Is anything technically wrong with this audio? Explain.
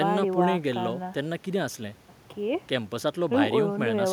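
No, nothing technically wrong can be heard anywhere in this speech recording.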